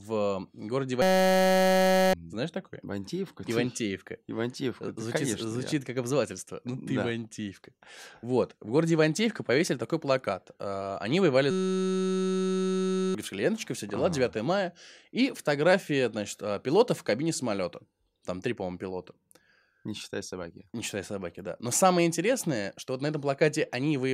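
Speech clip with two system hang loops, from 1.02 to 2.13 s and again from 11.51 to 13.15 s. Each time the system stalls and the sound hardware keeps replaying the same 5.33 ms scrap of its ring buffer, which fits a 256-sample buffer, a few hundred times over. With a slice that short, you hear a steady buzz at about 188 Hz rather than a stutter. Roughly a second of real speech goes missing in the first hang and about a second and a half in the second.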